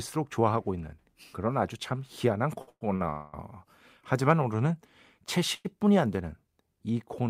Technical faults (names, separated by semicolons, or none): short stall from a late packet; call audio freeze